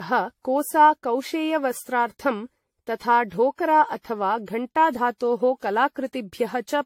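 Speech with generation loss throughout. It sounds swirly, hollow and smeared, with blurred attacks and nothing above 16.6 kHz. The cause is likely many repeated lossy encodes, perhaps seven.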